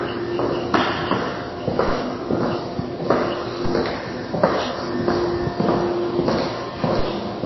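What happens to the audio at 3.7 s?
At 3.65 s there's a DC step. The waveform's zero line suddenly jumps to a new offset, and you hear that jump as a single low thump or click while the sound carries on unchanged. The offset doesn't hold. It drains away, the way a 5 Hz high-pass lets a shifted baseline relax back to zero, so there's no second click when it returns.

That moment also sits inside audio that's dull and watery the whole way through. Nothing reaches above 5.8 kHz, and the damage is plainly audible: weak frequency content flickers in and out between frames, giving a swirly texture and smeared attacks. That's most likely MP3 compression, and the heavy treble cut fits a low bitrate of roughly 24 kbps.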